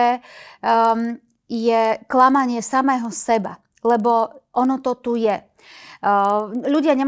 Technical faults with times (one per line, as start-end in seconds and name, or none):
0.00-7.07 resampler restarted on every block